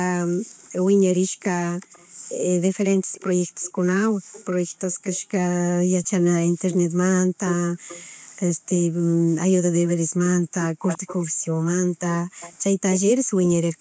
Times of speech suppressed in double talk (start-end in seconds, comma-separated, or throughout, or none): none